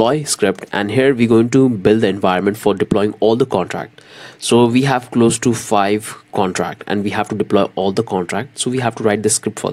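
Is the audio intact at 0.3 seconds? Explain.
Yes, the audio is intact at 0.3 seconds, with no fault present at that moment.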